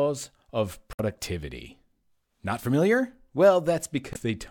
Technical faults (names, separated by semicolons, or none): damaged data in a compressed stream